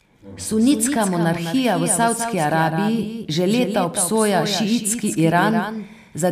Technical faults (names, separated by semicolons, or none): doubled audio track